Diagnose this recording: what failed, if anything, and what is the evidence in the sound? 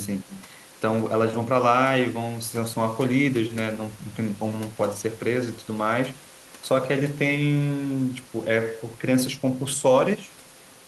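Nothing stood out on listening to this speech recording, with only the room's own background noise sitting about 26 dB below the voice.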